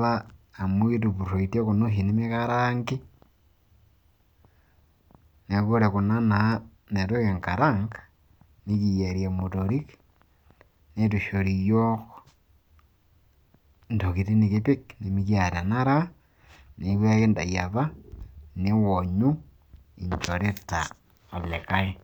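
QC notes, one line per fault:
No faults detected.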